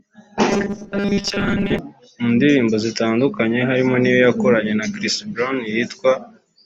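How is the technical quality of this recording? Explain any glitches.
One glitch stands out: robotic sound from repeated short buffers, from 0.50 to 1.79 s, ending just before "mu ndirimbo zitandukanye harimo". The speech turns into a rigid metallic buzz fixed at 200 Hz, likely caused by audio arriving too slowly, so a 5 ms chunk is looped to cover most of that stretch. A spectrogram shows flat, evenly spaced harmonic lines, and the waveform repeats near-identical short cycles.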